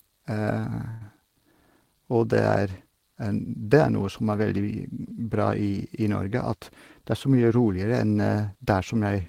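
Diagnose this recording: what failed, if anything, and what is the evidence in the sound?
At 0.90 s the speech stops moving and the last sound hangs on as a fading buzz or hiss for about 107 ms, then resumes where it left off with nothing lost. This is a call audio freeze, likely a network stall that emptied the jitter buffer, adding about 107 ms of delay.

From 6.26 to 6.59 s and again from 7.00 to 7.79 s the speech sounds hurried at unchanged pitch, running at about 108% speed. This is a jitter buffer speed-up: the receiver trimmed pitch-period slices, roughly 40 ms and then 70 ms, to shed the delay it had built up.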